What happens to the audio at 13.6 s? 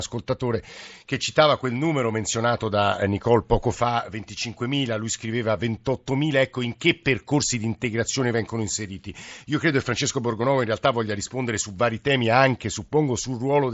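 Nothing goes wrong at 13.6 s: the speech is intact there, carried by the Bluetooth mSBC headset codec with its usual band limit of about 7.7 kHz.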